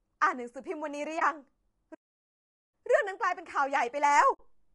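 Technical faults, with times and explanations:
Throughout: low-delay AAC compression. The speech sounds rough and grainy, with noise filling the gaps between harmonics and a thin, synthetic-sounding top band. This likely comes from AAC-ELD near 32 kbps. Its short frames resolve pitch harmonics poorly, and at this low bitrate too few bits remain for clean detail.
1.19–1.22 s and 4.33–4.40 s: AAC frame loss with muting. The sound fades into brief soft-edged holes of 20 ms and 60 ms. The first fits one lost frame and the second three. The decoder zeroed those frames, and overlapping windows smoothed the edges.
1.94–2.74 s: playback stall. The speech stops in mid-flow for about 0.78 s of silence, then resumes. The likely cause is the player running short of data or its thread being blocked, so output went silent until it recovered.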